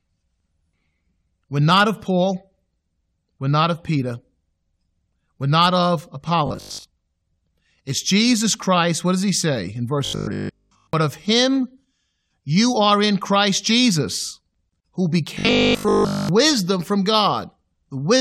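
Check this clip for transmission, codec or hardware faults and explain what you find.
Robotic sound from repeated short buffers appears three times in this speech, at 6.47–6.85 s, 10.05–10.93 s and 15.35–16.29 s. Each time the voice turns into a rigid, metallic 50 Hz buzz. The likely cause is a 20 ms buffer replayed in place of missing audio, covering most of the first two stretches and all of the last.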